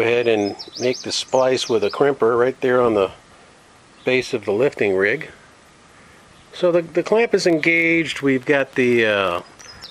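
From about 7.45 s right through to 9.85 s there's a train of clicks: around 8.4 a second, unevenly spaced, so roughly twenty in all. They're pretty much identical pulses, peaking about as loud as the sound itself, so they read as a ragged ticking or popping laid on top, and they carry on through the quieter moments too. That repeated, same-shaped pulse is most likely interference from nearby gear or a faulty connection or power supply.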